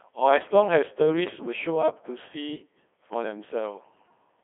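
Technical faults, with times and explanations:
Throughout, Codec 2 vocoder: the speech sounds robotic and buzzy, held within roughly 250 Hz to 3.5 kHz. The decoder rebuilds each voice from sine waves using only pitch, voicing, energy and envelope, discarding the waveform; the heavy damage points to about 2.4 kbit/s.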